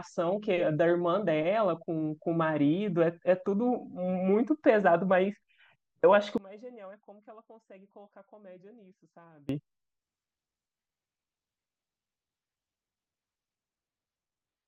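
From 6.38 to 9.49 s the speech drops by about 24 dB to a faint copy. The likely cause is one channel inverted, cancelling centred sound in mono.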